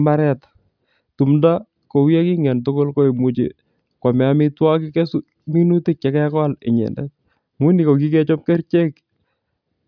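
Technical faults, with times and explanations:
No technical faults can be heard in this speech recording. There is nothing to mark at any point in the audio.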